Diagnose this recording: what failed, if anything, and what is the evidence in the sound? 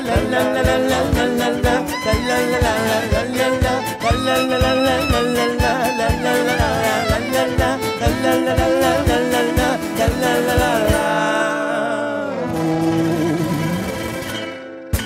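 From 12.14 s to the end at 15.06 s the audio runs about 1.5 times faster than before, with no change in pitch. The pace jumps abruptly at 12.14 s, and the section sounds rushed. This is a time-stretched section, likely introduced at a software editing or playback stage that compressed the tail to fit a length. It holds pitch by discarding short overlapping slices of the waveform.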